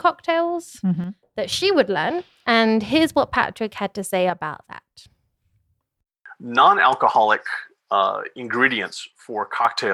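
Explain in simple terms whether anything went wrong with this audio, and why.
Something did go wrong, three times. The speech suddenly dips to about half as loud from 1.04 to 1.52 s (just before "would learn"), again from 4.30 to 5.10 s (right after "had to say"), and once more from 8.94 to 9.65 s, then snaps back. That pattern points to one channel dropping out. One side of the stereo likely went silent for a moment, so when both sides are mixed together, only half the sound is left.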